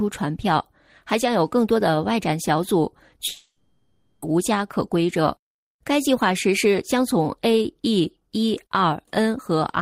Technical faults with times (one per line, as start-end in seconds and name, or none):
3.27-4.23 long network dropout